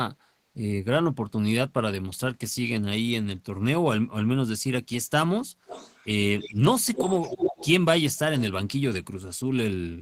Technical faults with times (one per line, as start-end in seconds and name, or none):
5.66-6.07 echo leak
6.38-6.60 echo leak
6.94-7.70 echo leak